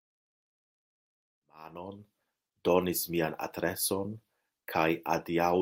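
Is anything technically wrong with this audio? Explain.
No, the speech signal is technically sound, with its only notable level change being a smooth fade-in that begins at roughly one and a half seconds and reaches full level by about 2.49 s, with no click or hard edge.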